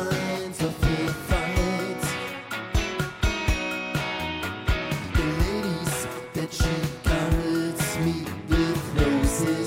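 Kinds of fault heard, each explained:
No faults can be heard.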